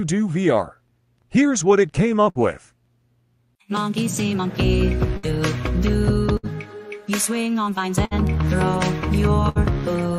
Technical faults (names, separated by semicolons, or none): burst of packet loss